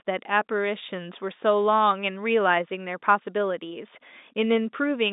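No faults are audible anywhere in this speech recording.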